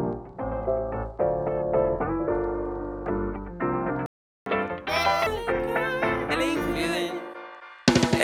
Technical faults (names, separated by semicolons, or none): playback stall; catch-up at higher speed